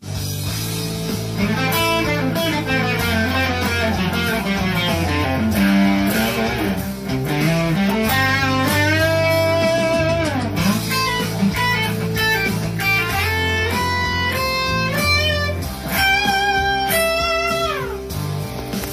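At 17.47 to 17.52 s, compressed frames skipped: about one frame, which fits a 46.4 ms frame length, is never decoded, so the sound jumps ahead by about 50 ms.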